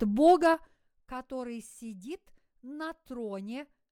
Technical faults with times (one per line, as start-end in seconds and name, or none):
0.37-0.93 zipper noise